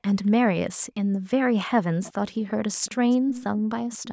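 A delayed copy of the speech trails behind it, at 0.23 to 0.31 s, 2.03 to 2.51 s, 2.73 to 2.95 s, 3.29 to 3.44 s and from 3.92 s to the end. It lags by about 237 ms, barely audible at first and rising unevenly to a clear ghost in the last two stretches. This is echo leak, likely from a far end on loudspeaker whose echo canceller let part of its microphone pickup return.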